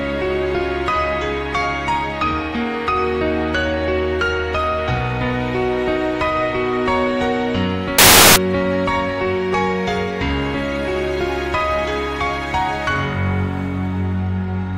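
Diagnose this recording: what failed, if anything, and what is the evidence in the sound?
The sample-format conversion failed: from 7.98 to 8.36 s the reader assembled samples from the wrong bytes, so the rapidly changing low-order bits landed in the high-order positions. For those 0.38 s the sound becomes loud, harsh broadband noise.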